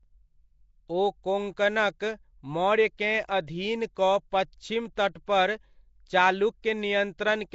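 Nellymoser compression runs through the whole clip, likely from the old Flash microphone codec, Nellymoser Asao. It codes the signal in short blocks at a fixed two bits per sample, so bands too weak to earn bits are replaced with synthetic noise. The damage is plainly audible: the speech carries a rough, hissy halo and a smeared, underwater quality. Nothing remains above 7.7 kHz, and the sound fits a rate of around 32 kbps.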